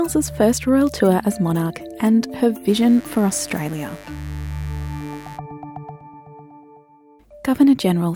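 A steady, raspy mains buzz sits under the audio from 2.67 to 5.40 s, roughly 25 dB below it. Sharp 50 Hz switching spikes, likely from a dimmer, rectifier or missing shield, fire twice per cycle, drawing a spectrogram comb of harmonics into the kilohertz range and small 100 Hz ticks on the waveform.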